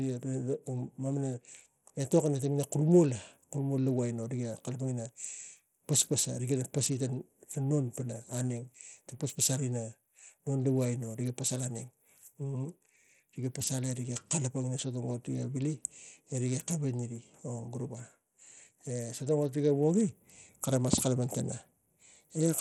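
A speech recording that carries audible codec damage from start to finish, most likely Bluetooth SBC compression at a low bit pool, with the sound fitting a rate of about 80 kbps. The upper frequencies thin out and flicker as the top sub-bands are starved of bits, while the remaining bands are coarsely quantised, leaving a gritty, granular noise and some aliasing riding on the speech throughout the clip.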